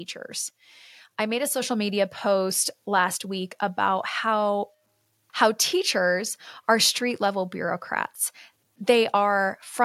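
At 1.62 s the whole sound abruptly gets louder by about 4 dB, with the voice and the background noise jumping together in one step. This is the microphone volume stepped up: the call software judged the input too quiet and raised the device's input level at once.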